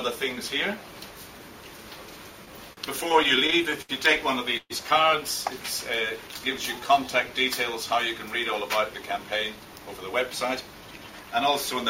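From 2.45 to 3.91 s there's a run of repeated stalls, a proper stutter: eleven little hangs, the longest 75 ms, about 216 ms of filler in all, roughly 15% of that stretch. Packets kept turning up late, the jitter buffer kept running dry, and the receiver held the last sound each time. Nothing is lost, it just drags and hiccups.

At 4.57 s comes a short call audio freeze lasting to 4.72 s. The sound hangs as a fading smear for 130 ms, the last 50 ms of it silent, then picks up exactly where it stopped. That's likely packets held up in transit, pushing the playout about 130 ms later.

Between 6.17 and 7.28 s there's a jitter buffer slow-down. The receiver stretched things to rebuild its reserve, repeating single pitch periods and slices of pauses, which adds 98 ms. Playback runs at about 92% speed with the pitch unchanged, so sounds come out a bit drawn out.

From 9.18 to 11.37 s it flips to a jitter buffer speed-up. 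With too much audio queued, the receiver trimmed tiny pitch-period chunks again and again, around a fifth of a second in total. It plays at about 109% speed, same pitch, and sounds noticeably hurried.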